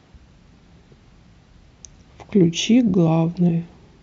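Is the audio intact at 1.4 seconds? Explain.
Yes, the speech at 1.4 seconds plays through cleanly, with no dropout, click, distortion or other fault at that moment.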